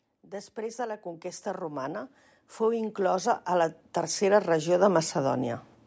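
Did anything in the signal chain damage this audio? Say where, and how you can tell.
Yes: automatic gain rising from 0.21 s to 5.12 s, in the call-processing stage. The call's gain control judged the input too quiet and raised its gain steadily by about 19 dB, so the speech and the background noise swell together over nearly five seconds.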